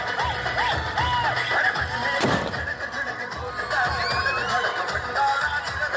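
From start to finish the sound carries a buzz at 100 Hz, the mark of a resampler restarted on every block. The rate is consistent with a conversion from 48 kHz down to 16 kHz done in separate 10 ms chunks, each filtered without its neighbours, leaving a small error at every edge. Unlike mains hum, the buzz disappears whenever the signal falls silent. Unlike dropouts, its ticks are perfectly regular and nothing goes missing.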